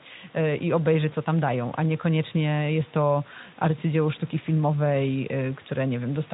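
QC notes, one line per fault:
No faults found in this clip.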